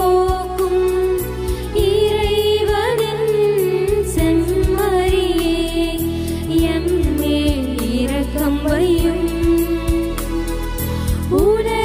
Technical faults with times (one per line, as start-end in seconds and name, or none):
none